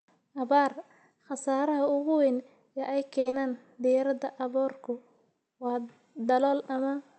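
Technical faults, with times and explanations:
3.19 to 3.27 s, short stall from a late packet: the sound freezes and is held for about 60 ms, with a slight buzz or dip, before it picks up again. A packet arrived late, so the jitter buffer ran dry and the receiver kept extending the last bit of audio until the packet came. Playback then resumed exactly where it had stopped, so nothing is lost, but the audio right after this point plays about 60 ms later.
3.29 to 3.34 s, short concealed packet loss: a brief smeared wobble, only 30 ms of filled-in sound, while about 60 ms of the real audio never plays. The receiver covered the gap by continuing the preceding sound and blending it back into the real signal. It skipped ahead instead of waiting, to win back part of the delay from the stall just before. That shortened the delay by roughly 30 ms.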